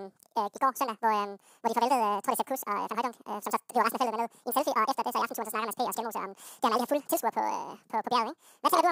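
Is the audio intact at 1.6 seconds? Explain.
No. At 1.6 seconds the speech is affected by audio read two samples at a time (double speed), a fault present throughout the clip. The reader consumes sample pairs as single frames, as if the data had two channels or samples twice as wide, so playback runs at 2x speed and pitch rises by 12 semitones, a full octave. The speech sounds hurried and chipmunk-like.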